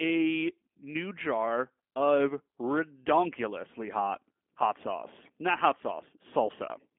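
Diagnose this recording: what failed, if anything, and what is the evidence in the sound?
G.729 codec damage runs through the whole speech clip, a codec-stage fault. The speech sits in a 250 Hz to 3.4 kHz line band with nothing above 3.5 kHz, and it has a plainly audible rough, synthetic quality. That fits an 8 kbit/s coder that rebuilds each 10 ms frame from a vocal tract filter, a pitch predictor and a few pulses.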